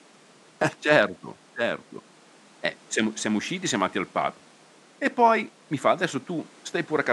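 No system faults are audible in this speech; the only background is the room's own ambience, sitting about 29 dB below the speech level.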